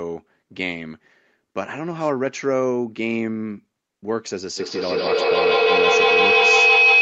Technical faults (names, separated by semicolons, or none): feedback howl